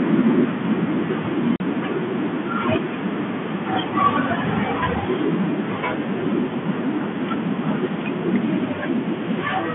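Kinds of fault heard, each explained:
Packet loss filled with silence: lost packets leave a 40 ms dead gap from 1.56 to 1.60 s, a flat waveform line and blank spectrogram strip with hard edges.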